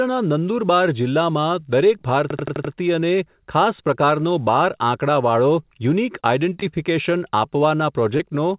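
From 2.30 to 2.73 s a system hang loop repeats one 85 ms slice of speech five times, which fits a 4096-sample ring buffer replayed while the machine froze. It sounds like a machine-gun stutter at about 11.7 Hz. The exact, identical repeats are what set it apart from network concealment, which improvises new sound.

At 6.20 s (about 40 ms) comes the first short concealed packet loss. Roughly 20 ms of speech never reached the decoder. The receiver extrapolated the preceding sound and crossfaded back, leaving a brief smear. Unlike a stall, real audio is actually gone here, so a short consonant can drop out.

At 6.54 s a short stall from a late packet holds the current sound for about 18 ms, a small added delay, before resuming where it left off. Nothing is lost. The tell is a sound dragged slightly too long, with a slight buzz or dip, rather than a gap or a skipped sound.

Two more concealed losses follow, at 6.60 s and 8.17 s, each covering about 20 ms of missing speech with a short smear or wobble. 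They are carried over the G.711 call path, whose band stops at 4 kHz.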